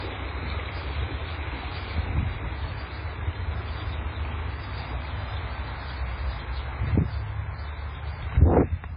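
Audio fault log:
throughout, low-bitrate audio saved at a high bitrate: the audio was likely squeezed through a very low-bitrate MP3 stage first and only later written out as a much larger MP3, so the second pass had nothing left to recover. Nothing sounds above 5 kHz, leaving a dull, closed-in top end, and the smeared, watery coarseness of heavy compression stays fixed in the sound, consistent with an early encode somewhere near 15 kbit/s.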